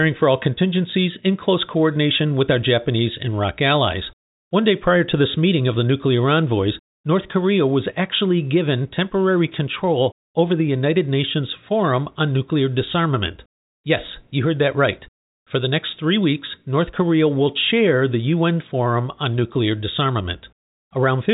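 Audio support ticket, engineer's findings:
No faults found in speech.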